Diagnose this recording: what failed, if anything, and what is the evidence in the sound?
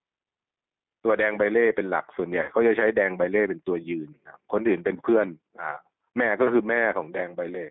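Gain pumping runs throughout the clip. The gain swings by about 5 dB under loud speech, likely from a microphone gain set too high feeding a fast limiter in the call processing.

The G.729 codec damage is plainly audible throughout. Speech sounds rough and synthetic, with nothing above 3.6 kHz and the lowest bass thinned, which fits an 8 kbit/s G.729A codec stage.

VoIP packet loss concealed by the speech codec occurs from 2.42 to 2.51 s. Roughly 60 ms of audio, fitting three lost packets, turns into a fading extrapolation before the speech recovers.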